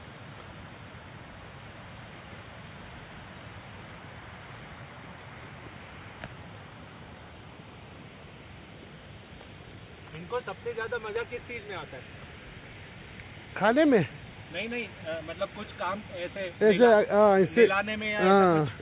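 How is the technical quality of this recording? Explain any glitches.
There are no glitches to explain in this recording. It sounds like it came through a call path, with nothing audible above about 4 kHz, which fits narrowband telephone coding such as G.711 A-law.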